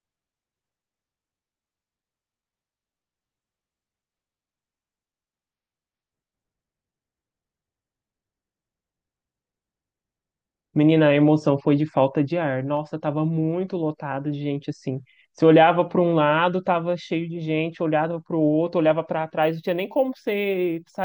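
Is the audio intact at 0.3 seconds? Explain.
Yes, the speech at 0.3 seconds plays through intact, with no audible dropout, click, distortion or other fault at that moment.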